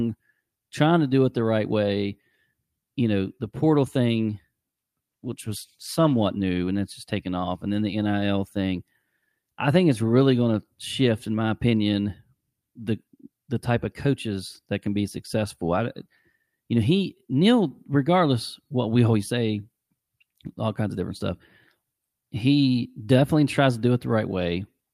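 From 5.11 to 6.33 s there's a call bitrate drop. The encoder gets starved of bits and codes the speech more coarsely, so it turns rough and watery, which fits a fall from about 40 to 18 kbps, before clearing up just ahead of "new and it's just".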